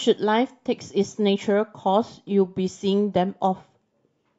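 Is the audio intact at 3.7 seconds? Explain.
Yes, at 3.7 seconds the speech runs on without any dropout, glitch or other fault.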